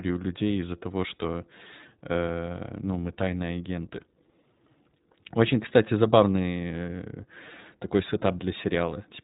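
iLBC codec damage runs throughout the speech. Nothing above 3.8 kHz survives, which leaves the sound narrowband and muffled. Each 20 ms frame's excitation is coded independently, giving a plainly rough, slightly synthetic texture, consistent with the 15.2 kbps mode.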